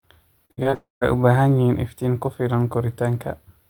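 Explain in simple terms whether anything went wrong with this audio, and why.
Between 0.45 and 0.74 s, the connection repeatedly lost or delayed small chunks of the speech, four times in quick succession. This is repeated packet loss, which gives a robotic sound: the receiver patches each gap by stretching the last sound, so nearly half of this stretch is filler, heard as choppy speech with pieces missing.

From 0.74 to 1.03 s the speech drops out entirely. This is likely a long network dropout, where no audio reached the listener for about 0.28 s. A fading buzz continues the last sound, then about 0.15 s of silence follows before the speech resumes, with that part lost.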